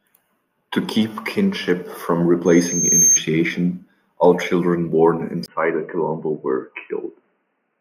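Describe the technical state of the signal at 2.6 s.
A piercing 6.4 kHz tone swells over most of a second, from 2.45 to 3.21 s, ending a few dB above the speech: loudspeaker feedback squeal, where the microphone re-amplifies its own loudspeaker.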